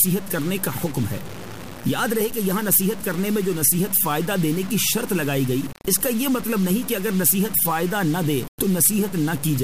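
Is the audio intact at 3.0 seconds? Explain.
No. At 3.0 seconds the sound carries two faults. The first is low bit depth without dither, present throughout the clip. Grainy distortion tracks the signal, roughly 15 dB below it, and the quietest parts sputter or fall silent. This points to truncation to about 5 bits, likely with no dither added. On a waveform the trace shows visible stair-steps. A spectrogram shows harsh broadband hash that rises and falls with the level instead of a steady noise floor.

The second is clock slip clicks, running from 0.11 to 9.62 s and so covering this moment. A faint tick repeats about every 40 ms and blurs into a soft rattle. This fits two devices whose clocks differ by around 500 ppm, likely with no sync between them, so a single sample is dropped or repeated each time the drift adds up to one. A spectrogram shows evenly spaced thin vertical lines. The waveform shows tiny discontinuities at the same spacing.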